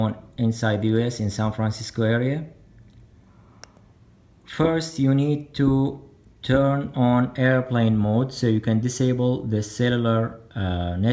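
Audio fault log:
Nothing to log here; the audio runs along without a single problem worth noting.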